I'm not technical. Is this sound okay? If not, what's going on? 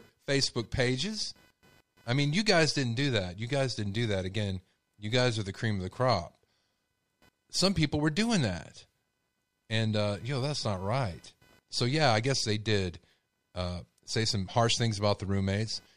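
No. Throughout the speech there's a faint buzzing, pulsing around 500 times a second. This is computer activity noise: the computer's busy parts disturb the audio wiring. Unlike steady mains hum, it shifts with the computer's workload, not with the speaking.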